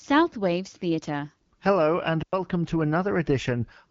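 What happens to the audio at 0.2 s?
Nothing goes wrong at 0.2 s: the speech passes through intact, carried by the AMR wideband (HD Voice) codec at 12.65 kbit/s.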